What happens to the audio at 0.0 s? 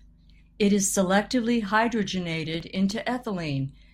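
At 0.0 s the audio is intact, with no dropout, click or other fault.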